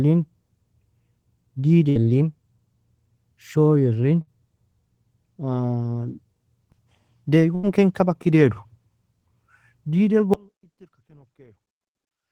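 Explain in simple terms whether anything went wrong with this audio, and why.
Yes, a few things went wrong. The first is a burst of packet loss, heard at 1.89, 4.21 and 7.55 seconds. Each time, a short run of data never arrived in time to be played. The playback kept the last sound going and faded it over the hole, which fills about 60 ms the first two times and about 80 ms the third, then jumped ahead. That stretch of speech is simply gone.

The second is an audio dropout to a faint residue, starting at 10.34 seconds and lasting to the end. The speech cuts out abruptly rather than trailing off, and all that remains is a very faint trace of sound, far quieter than before. The likely cause is that the signal itself was lost while the recording path after that point stayed switched on, so it kept capturing only that weak leftover.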